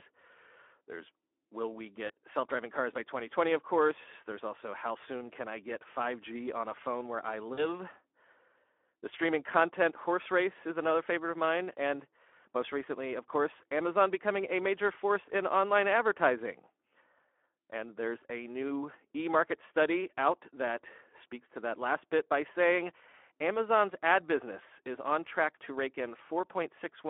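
From start to finish the speech carries Speex codec damage. The low-bitrate CELP coding, which fits a setting around 11 kbps, leaves too few bits for the excitation, so the voice sounds hoarse and grainy, with a plainly audible noisy roughness. It sits inside a telephone band of 300 Hz to 3.4 kHz, with nothing above or below.

At 2.07 to 2.11 s comes the first instance of VoIP packet loss concealed by the speech codec. About 20 ms of audio, consistent with one lost frame, is missing. The decoder stretches its last pitch and filter to fill the gap. At 7.53 to 7.67 s a longer gap of about 40 ms, pointing to two frames, is filled the same way. The extrapolated sound fades and stays weak or distorted for tens of milliseconds after the missing span before normal decoding resumes.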